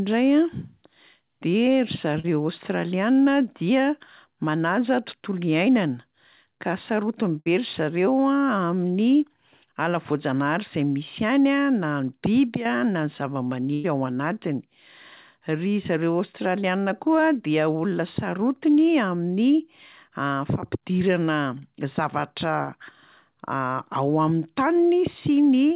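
At 2.20 to 2.26 s, just before "aostraliana dia manaja", and at 22.64 to 22.70 s, after "fampidirana zavatra", short concealed packet loss smears about 40 ms into a brief smear or wobble, shown as a blurred vertical seam in the spectrogram. Bursts of packet loss at 7.40 to 7.48 s, after "ka sarotiny", and 13.74 to 13.86 s replace 60 and 100 ms with a continuation of the last sound that fades away, seen as a decaying stretch and a tapering waveform. The band ends at 4 kHz throughout, fitting the G.711 A-law call path.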